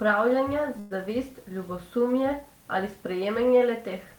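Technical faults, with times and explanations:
0.79–0.93 s, call audio freeze: the sound stalls into a short fading buzz or hiss for about 112 ms, then picks up exactly where it left off, so nothing's lost but everything after lands that much later. Likely packets held up in transit, draining the jitter buffer.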